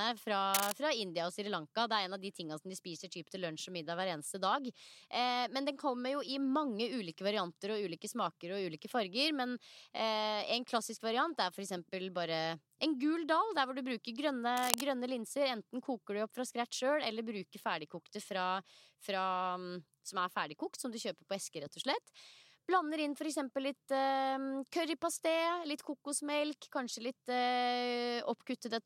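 At 0.54 to 0.72 s and again at 14.57 to 14.83 s, bursts of cable scratch noise rasp over the speech at roughly its own level, likely from a worn cable or connector shifting. Spectrograms show ragged broadband smears; waveforms show dense, jagged spikes.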